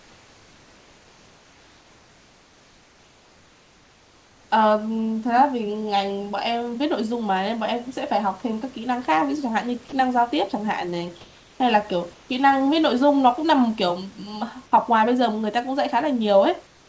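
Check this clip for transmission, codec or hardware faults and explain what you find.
Two faults appear, both from how silence is handled on a call link whose bandwidth stops at 8 kHz, which fits a wideband codec such as G.722.

Comfort noise in place of the background occurs from 0.0 to 4.5 s, from 12.14 to 12.29 s, and from 16.67 s to the end. The sender likely stopped transmitting during pauses, so the receiver generated substitute noise. It is steady and featureless, about 3 dB quieter than the real room tone (about 2 dB at 12.14 s). A spectrogram shows a smooth, uniform noise floor, and the waveform shows a flat, even band.

Sound dropped by the voice detector appears from 9.89 to 9.92 s. The detector likely mistook part of the speech for background, so about 20 ms of speech is replaced by synthetic noise within a 30 ms gap. The speech briefly gives way to steady noise, then comes back. 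On a spectrogram the speech harmonics break off abruptly into smooth noise.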